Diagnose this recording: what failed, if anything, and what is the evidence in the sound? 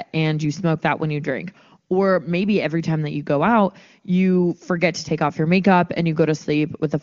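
Nothing failed in this recording, and the sound gives no evidence of a fault at any stage.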